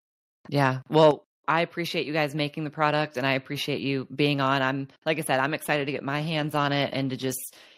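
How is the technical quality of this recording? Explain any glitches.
The recording has three audible faults, two close together near the start and one at the end.

From 0.96 to 1.09 s, just before "I appreciate you guys", there is microphone overload. The input was likely set too hot, so peaks pushed about 3 dB past the converter's ceiling. A small share of samples lost their tops, giving the loudest syllables a harsh, crackly edge.

At 1.11 s, the microphone volume steps down. The call software likely reacted to the overloaded peak by cutting the input gain in one move, about 6 dB. Voice and background both drop suddenly in level, right as "I appreciate you guys" begins.

From 5.65 s, after "like I said I'm", to the end of the clip, there is a call bitrate drop lasting about 2.1 s. The connection's bandwidth estimate fell, and the encoder switched to far fewer bits. The sound points to a fall from around 40 kbps to around 18 kbps. 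The speech turns coarse and watery, and the top end is dulled.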